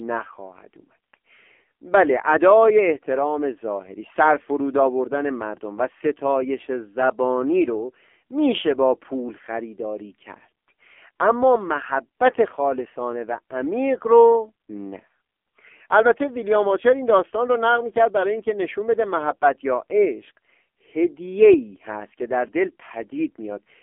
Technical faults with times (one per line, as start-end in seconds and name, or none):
0.00-23.82 AMR narrowband mobile codec